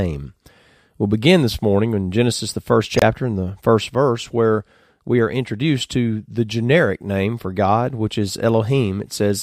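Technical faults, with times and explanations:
2.96 to 3.03 s, corrupt frame decoded: between "the first" and "in the first verse" a short burst of harsh, misplaced energy cuts across the speech. Bit errors in the compressed stream left the decoder misreading gains and spectral codes, so it rebuilt energy at the wrong frequencies and played it anyway. The roughly 70 ms duration fits a few consecutive damaged frames, heard as a single abrupt burst.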